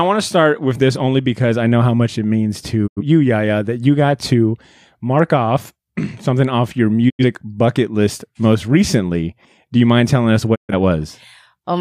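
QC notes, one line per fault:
2.86–3.02 s, 7.08–7.24 s and 10.54–10.74 s, digital broadcast dropout: the receiver mutes with quick 20 ms fades and the programme picks up later, about 85, 85 and 128 ms lost, which fits two, two and three bad frames.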